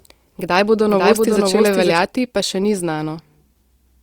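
From the very start until 1.98 s there's a doubled audio track: a clean, somewhat quieter copy trails about half a second behind, likely a second capture path, then cuts off abruptly.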